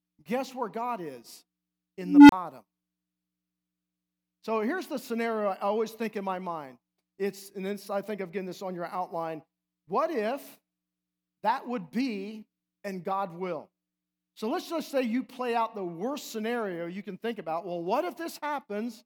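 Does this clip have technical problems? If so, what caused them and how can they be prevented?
Yes. At 2.01 s a low tone near 300 Hz swells out of the speech over about 0.28 s. It grows very loud and clips, then the sound cuts out for 30 ms and returns at 2.32 s. This is an unstable filter. A recursive filter with bad coefficients kept feeding its output back with more than unity gain, so the tone grew without limit until the numbers overflowed and the filter reset. To prevent it, check that every recursive filter's poles stay inside the unit circle before the coefficients are applied.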